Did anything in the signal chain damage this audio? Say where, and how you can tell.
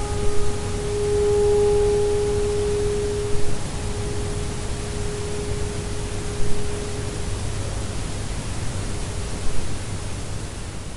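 No, nothing in the signal chain has damaged this recording of sounds. Listening through it, I can't point to any stage of the chain that has left its mark on the audio.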